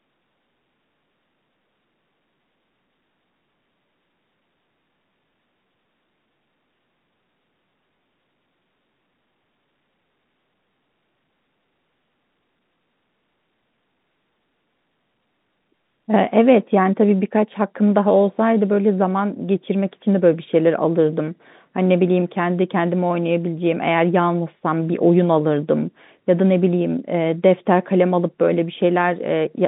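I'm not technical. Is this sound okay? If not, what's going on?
Yes, nothing is wrong with this speech recording. It sounds like an ordinary phone call because it went through standard landline telephone coding, which keeps only the middle range of the sound, roughly 150 Hz to 3.7 kHz, and lets nothing through above about 3.8 kHz.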